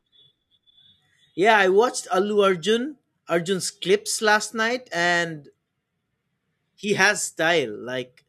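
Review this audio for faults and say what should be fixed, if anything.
No faults can be heard anywhere in the speech. Nothing needs fixing, so no preventive step is called for.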